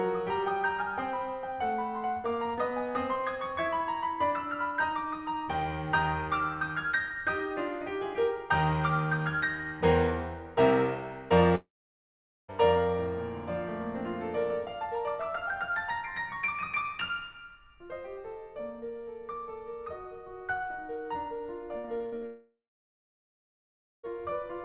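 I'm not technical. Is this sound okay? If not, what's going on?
No. Twice the connection most likely stopped delivering audio for a while, a long network dropout. From 11.55 to 12.50 s, and again from 22.26 to 24.11 s, the music briefly trails off as a fading buzz, then goes silent, and resumes with that stretch simply missing.

Just before the second gap, from 21.78 to 22.24 s, there is repeated packet loss (robotic sound): small chunks went missing five times in under half a second. The player patched each hole, leaving the music choppy, with nearly half of it filled in.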